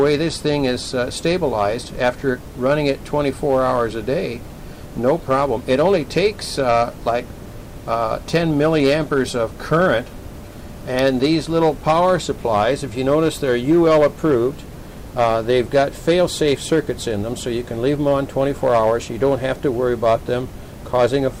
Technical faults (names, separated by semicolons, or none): hard clipping